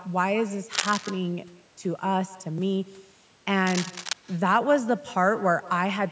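Speech recorded on a call where the far end has echo with no canceller: their loudspeaker feeds back into their microphone, so every phrase returns roughly 150 ms later as a thin copy about 20 dB down. A worn cable or connector being moved is the likely cause of the cable scratch noise at 0.73 to 1.12 s and 3.67 to 4.13 s, where dense, uneven rustling sits only slightly below the speech.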